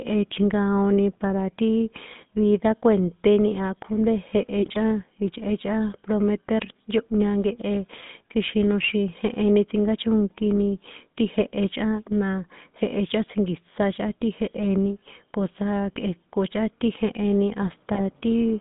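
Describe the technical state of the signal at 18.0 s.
At 18.0 s the speech breaks into a short burst of squawking, popping and gargling, from 17.92 to 18.03 s, just after "ti jeheni". These are GSM bit errors: a weak radio link let flipped bits reach the speech decoder, corrupting the filter, pitch and gain parameters so that each hit frame came out with a warped spectrum or a sudden jump in level. The damage fits roughly six 20 ms frames and an error rate near 1%.

Underneath, the voice has the buzzy, gravelly roughness of the GSM full-rate codec, and it is plainly audible. The band is limited to about 150 Hz to 3.6 kHz, so there is no air or sibilant sparkle. That grit comes from modelling the vocal tract and driving it with a coarse, regularly spaced pulse excitation that keeps only every third sample, consistent with a 13 kbps stream.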